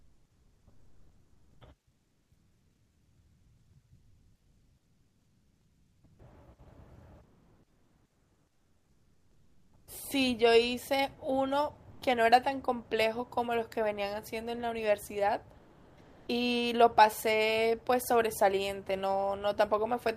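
A sender that likely stopped transmitting during pauses, as Opus discontinuous transmission does, leaves comfort noise in place of the background from 0.0 to 1.61 s, 1.91 to 6.19 s and 7.23 to 9.87 s. The real background becomes a flat, featureless hiss, about 9 dB quieter in the first stretch and about 5 dB quieter in the third. The voice detector is likely slow to react when sound resumes, so the onset is clipped at 6.16 s and 9.83 s. About 30 ms and 40 ms of each beginning are lost, and the sound starts abruptly. The detector also likely mistakes quiet parts of the speech for background, so sound is dropped at 6.63 s, 11.91 to 12.01 s and 15.57 to 16.27 s. Each time the speech gives way briefly to steady noise or near silence, and about 300 ms goes missing in the last gap.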